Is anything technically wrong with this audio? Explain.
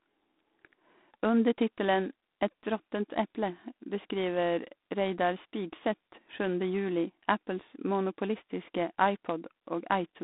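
Yes. Throughout, the speech shows G.726 ADPCM coding damage. Too few bits encode each sample's prediction error, likely 24 kbit/s, so a harsh, rasping hiss rises and falls with the speech level. Nothing passes above 3.8 kHz.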